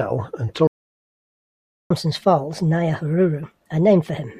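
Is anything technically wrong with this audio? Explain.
Yes, the speech stalls and then rushes to catch up.

Playback stall, 0.67 to 1.91 s: the speech cuts to silence for about 1.23 s mid-flow, then resumes. The likely cause is the player running short of buffered data, or its audio thread being blocked, so nothing reached the output until it recovered.

Catch-up at higher speed, 1.91 s to the end: after the stall the player resamples its backlog at 1.25 times normal speed to recover the lost time. Because speed and pitch rise together, the speech sounds hurried and raised by about four semitones.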